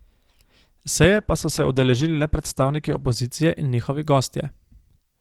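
A speech clip with two problems. At 1.04 to 1.06 s there's a single loud pop, roughly 10 dB above the speech, which carries on under it. That's likely a voltage spike from a plug, switch, static or driver glitch getting into the signal chain. Then from 1.17 to 3.17 s it sounds like an adaptive stream at a lower bitrate. The quality drops suddenly with no gap, nothing comes through above 12.1 kHz, and codec artefacts thicken. That fits the stream falling from around 64 to 16 kbit/s Opus while the connection slowed, then recovering.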